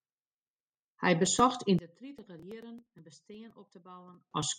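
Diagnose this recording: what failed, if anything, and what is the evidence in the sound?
From 1.79 s to 4.31 s the speech drops by about 24 dB to a faint residue, its centred body nearly gone. The likely cause is one channel inverted in the analogue wiring, so shared left and right content cancels in the mono sum.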